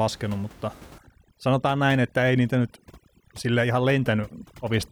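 A speech clip in which, from 0.98 s to the end, the background collapses into near silence dotted with twinkling specks, with the voice's quieter parts thinning out. This is overdone noise removal: a suppressor set too aggressively pushes individual frequency bands far down or off whenever they sit close to its noise estimate, taking soft speech detail with the room noise, which sits about 24 dB below the speech.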